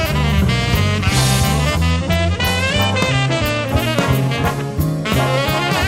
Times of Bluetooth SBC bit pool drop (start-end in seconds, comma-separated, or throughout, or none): 1.91-3.72